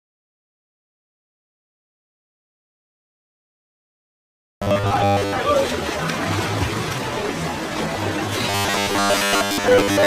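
Around 4.63 s the audio suddenly goes robotic until 5.36 s, then does it again from 8.5 s right through to the end. Both stretches carry a hard, metallic buzz at 100 Hz, with most of the real signal skipped. That's the classic robotic sound from repeated short buffers, likely caused by audio arriving too slowly so the last 10 ms chunk gets looped over and over.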